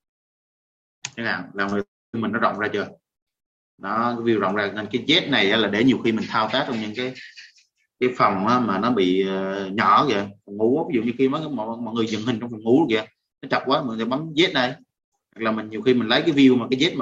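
At 1.69 to 1.73 s, a short concealed packet loss: about 20 ms of audio arrived too late, and the receiver extrapolated the previous sound, leaving a brief smear. From 1.81 to 2.15 s, a long network dropout is the likely cause: the receiver stretched the last sound into a fading buzz or hiss, then held near silence for about 0.27 s before audio resumed.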